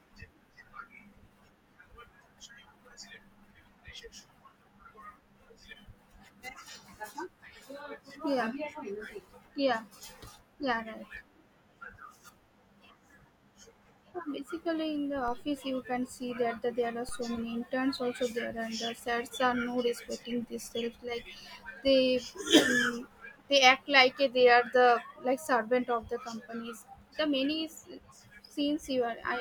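The waveform's zero line jumps twice in this speech, once at 15.28 s, just before "you can see", and again at 17.09 s. Each DC step is a sudden offset of about -34 dBFS that bleeds away through a 2 Hz high-pass, so it settles over a fraction of a second. Each step comes through as a short, low thump beneath the speech, which carries on unchanged across both events.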